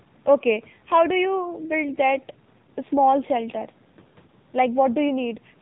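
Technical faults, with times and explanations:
throughout: AMR narrowband mobile codec. The speech was coded with AMR-NB at 8 kHz sampling and a low rate consistent with its 7.4 kbps mode. Nothing above 4 kHz survives, and the sparse pulse-driven vocal-tract model leaves the voice muffled and plainly buzzy and synthetic.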